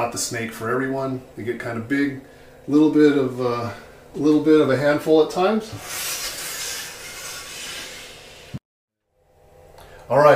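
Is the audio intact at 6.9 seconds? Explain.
Yes, at 6.9 seconds the audio plays through cleanly with no dropout, click, distortion or other break in the signal.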